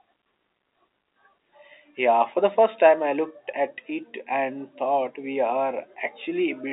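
No technical faults are audible.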